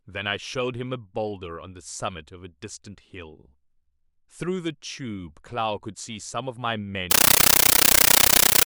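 From 7.11 to 8.66 s, loud chattering static replaces the speech in 13.3 ms bursts, 31.25 per second: a compressed stream played as audio, undecoded AC-3.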